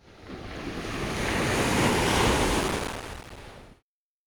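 A sound recording with processor overload crackle from 2.62 to 3.40 s. Many tiny silent gaps tear the sound. This fits around a hundred missed buffers of a few milliseconds each.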